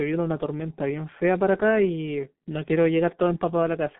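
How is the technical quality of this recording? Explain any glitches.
Technical quality is poor, held back by one persistent fault. The G.723.1 codec runs throughout: long 30 ms frames and a sound consistent with a rate near 6 kbit/s strip everything above 3.8 kHz, confine speech to roughly 150 Hz to 3.6 kHz, and track the voice too slowly, leaving it muffled, hoarse and heavily smeared at the consonants.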